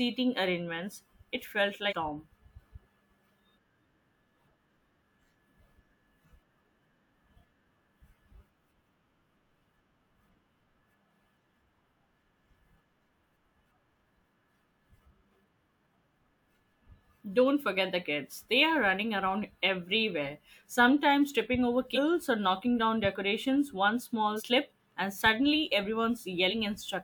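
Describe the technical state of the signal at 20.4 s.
At 20.4 s the speech signal is intact, with no audible fault at that moment.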